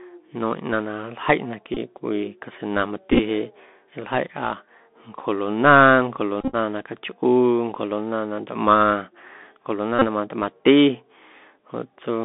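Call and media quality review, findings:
Bluetooth CVSD headset codec, whole clip: speech limited to roughly 200 Hz–3.6 kHz, granular hiss under speech, scratchy s sounds, loud bright syllables distorting. Step-size slope overload, consistent with 64 kbps CVSD. Hiss and overload distinguish it from plain band-limiting.

Bluetooth headset packet repeated, at 1.74–1.77 s (22.5 ms lost), 3.11–3.19 s (33.8 ms over 82.5 ms), 6.41–6.55 s (93.8 ms over 120 ms, longest run about 30 ms), and 9.99–10.05 s (26.2 ms). Buzz near 267 Hz, not silence, which fits repeated 3.75 ms packets.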